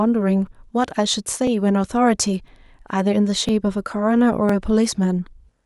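Overlapping chunks at 0.47, 1.47, 2.48, 3.49 and 4.49 s put a brief click or stutter into this speech at a steady one-second pace. The audio was handled in 1.0 s chunks, and each new chunk begins about 7 ms before the previous one finished, so that sliver of sound plays twice at every join. The duplicated fragment breaks the waveform's continuity, which is heard as the regular tick.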